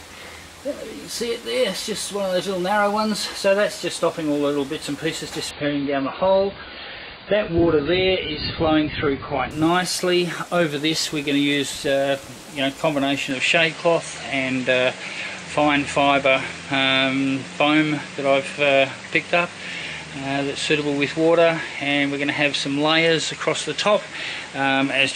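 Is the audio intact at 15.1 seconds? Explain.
No. From 13.31 s to the end, everything above 9.3 kHz is gone and a new noise floor appears about 35 dB down, with no gap or level jump. This is likely an input switched to a poorer device; the changed background sets it apart from a plain low-pass filter.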